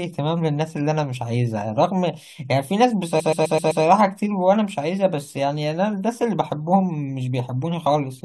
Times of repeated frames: 3.19-3.83

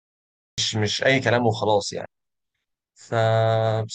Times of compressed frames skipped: 2.05

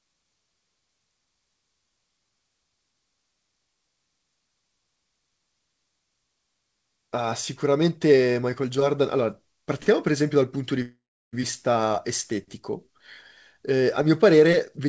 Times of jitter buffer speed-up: 14.45-14.87

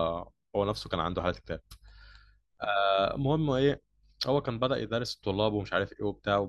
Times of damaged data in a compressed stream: none

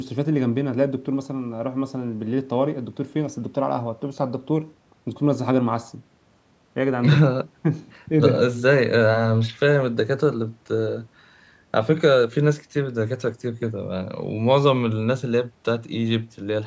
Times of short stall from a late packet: none

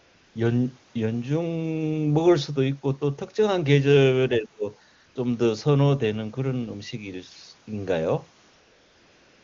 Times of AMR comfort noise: 0.00-0.35, 4.95-5.15, 8.49-9.44

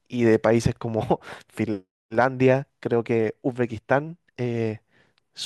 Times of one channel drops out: none

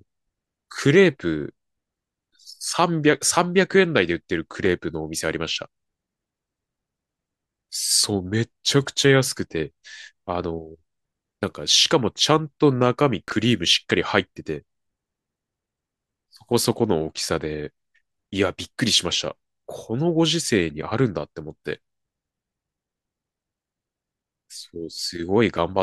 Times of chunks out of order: 13.28-13.32

